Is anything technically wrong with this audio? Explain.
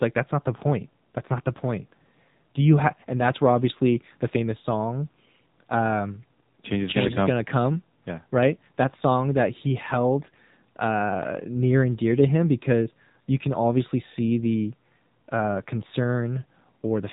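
Yes, there are two problems. The whole clip runs through the AMR narrowband mobile codec, so the voice is cut off hard at 4 kHz and sounds boxy and a bit buzzy, like an old phone call. That codec models the vocal tract and drives it with a few pulses per slice of each 20 ms frame. The synthetic edge here is plainly audible and fits one of the lower AMR-NB modes, around 7.4 kbps.

On top of that there are two short bursts of AMR bit errors. The first runs from 7.06 to 7.17 s, right after "change is change gonna". The second runs from 10.20 to 10.36 s, between "song that he" and "uh near and dear". Each lasts a handful of 20 ms frames. Some of the less protected bits arrived flipped, around 5 percent of them, while the check on the critical bits still passed, so the decoder used the bad data anyway. The pulses land in the wrong spots, and the voice briefly goes hoarse, scratchy and gargly while keeping roughly the same pitch and level.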